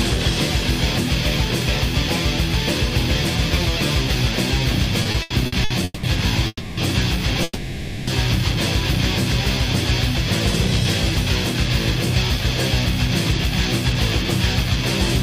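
Repeated stalls (stutter) from 5.03 to 6.05 s: packets arrived late six times, and the receiver stretched the last sound over 440 ms, the longest gap 190 ms, so the audio drags. Call audio freezes at 6.47 to 6.79 s and 7.43 to 8.09 s: the sound holds as a fading buzz for 300 ms, then 640 ms, with brief silence, likely packets held up in transit, before resuming where it stopped.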